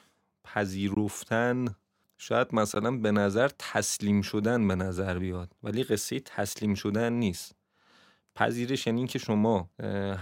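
A block of digital silence cuts into the speech at 0.95 to 0.97 s, and a second, 15 ms long, lands at 2.75 s. In each, the sound cuts out and returns with no fade. They last 20 and 15 ms. The cause is output buffers left unfilled in time, or invalid values zeroed out of the signal path.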